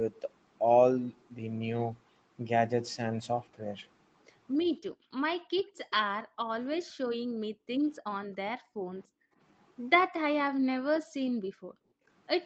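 From 4.92 to 5.13 s and again from 5.42 to 5.78 s, the background is gated by the echo canceller. The room sound dips by about 29 dB, then about 40 dB. The canceller is clamping the microphone while the far end plays.

At 5.9 s a faint delayed copy of the speech appears. It trails by 290 ms and sits around 25 dB below the talker. This is likely an echo leak, where loudspeaker sound slipped past the canceller.

The gating returns at 6.25–6.39, 6.81–7.0, 7.17–7.82, 8.59–9.39 and 11.02–12.06 s. Each time, the background falls away by about 40 dB. The later gaps last up to about a second.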